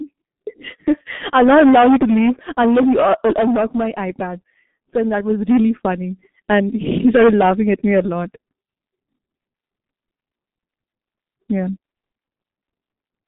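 Speech run through the G.723.1 codec for its whole length: the band sits between 150 Hz and 3.6 kHz, so it sounds muffled and hoarse, with smeared consonants that fit roughly 6.3 kbit/s. A spectrogram shows a hard ceiling near 3.8 kHz, with nothing above it.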